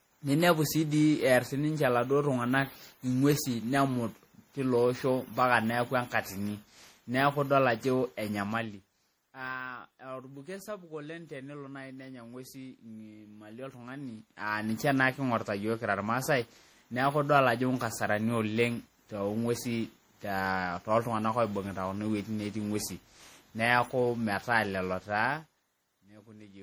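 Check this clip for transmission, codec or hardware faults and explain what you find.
One codec fault runs through the whole speech recording: generation loss, likely from the audio being decoded and re-encoded as MP3 around ten times, with the character pointing to something near 64 kbit/s. Each pass quantises the signal again on a shifted frame grid, so errors and spectral gaps compound. The result sounds swirly, smeared and hollow, worse than that bitrate alone would give, with blurred consonant attacks. Nothing is present above 20.8 kHz.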